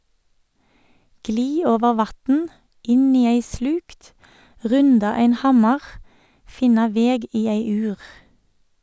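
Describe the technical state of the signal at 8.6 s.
At 8.6 s the audio is intact, with no audible technical fault in the signal at that moment.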